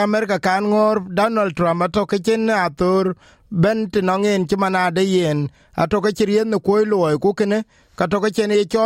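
No technical faults can be heard anywhere in the recording; the signal stays continuous and steady throughout.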